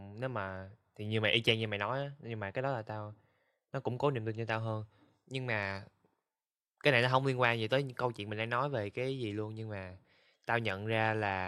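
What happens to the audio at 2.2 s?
Nothing goes wrong at 2.2 s; the speech runs through that moment intact, with no dropout, click, glitch or other fault to be heard.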